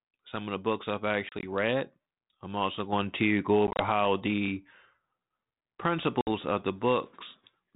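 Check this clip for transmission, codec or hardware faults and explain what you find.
Packet loss on an ADPCM call shows up in three places.

At 1.29 to 1.46 s, between "of the books I've" and "read I'm also going", about 60 ms of sound drops out in short holes scattered over 140 ms, none longer than 30 ms. At 3.67 to 3.83 s, after "also going to go" and before "how the", 70 ms goes missing across 120 ms. At 6.21 to 6.3 s, just before "of the", another 60 ms vanishes.

Each hole is hard-edged silence. Once packets go missing, the decoder's adaptive predictor and step size drift away from the sender's. So when sound resumes it comes back slightly distorted, then settles within some tens of milliseconds.

The telephone-band coding underneath, which fits 32 kbit/s G.726, carries only light codec damage.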